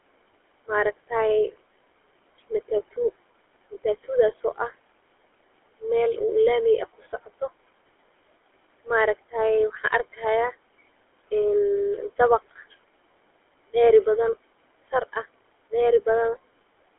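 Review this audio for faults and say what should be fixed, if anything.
Noise suppressor artifacts, throughout the clip: the suppressor lowers every frequency band it judges to be steady background. The room noise, about 19 dB below the speech, drops by about 21 dB in pauses and swells back under speech. Use gentler suppression, or place the microphone better so less reduction is needed.

GSM full-rate codec, throughout: the speech is rebuilt from a vocal-tract model driven by sparse, regularly spaced pulses. This gives a plainly audible buzzy, gravelly roughness. Nothing above 3.8 kHz survives, which fits a 13 kbps GSM full-rate link. Carry the call over a wideband codec such as AMR-WB or Opus instead.

Speech cut by the noise suppressor, 6.98 to 7.42 s: in this window the suppressor mistook parts of the speech for noise and turned them down by up to about 15 dB. Roughly a tenth of a second in total is affected, so those sounds come across swallowed and faint. 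Strengthen the suppressor's speech protection or reduce its maximum attenuation so quiet speech is not treated as background.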